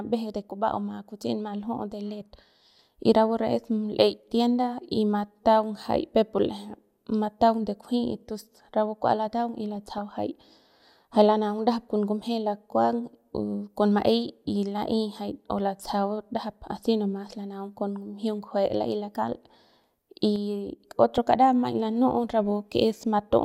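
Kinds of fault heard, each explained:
DAB burbling: Between 9.75 and 10.12 s, just after "rapu kua lataung y", there is a burst of burbling in the speech, and a shorter burst at 21.16 to 21.18 s comes just before "kara maiñ". Corrupted bits, at a rate of roughly 0.2 percent, slipped past error correction into the MP2 data, so single sub-bands leap in level frame by frame. Unlike a dropout, nothing goes silent; the damage is band-limited blips rather than a gap.
sudden gain jump: From 20.36 s to 20.8 s the level drops abruptly by about 5 dB, and the background noise falls along with the speech at the same instant. The likely cause is a digital gain setting changed from one sample to the next with no ramp. A compressor or automatic gain control would ease into the change and follow the speech. Here the step is instantaneous and takes the whole signal with it.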